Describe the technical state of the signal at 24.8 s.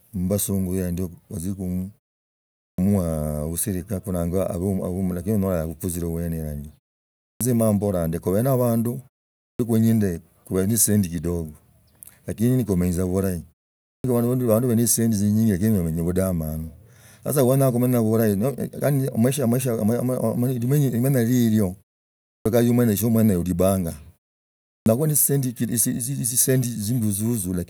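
At 24.8 s the sound bursts out of silence with its opening sliced off: roughly the first 91 ms, from 24.77 to 24.86 s, is missing, so the onset arrives abrupt and without its first sounds. This is a clipped start after a pause. During the preceding 0.67 s of silence the output device dropped into a sleep state and had not fully woken or relocked when the signal resumed, swallowing the beginning.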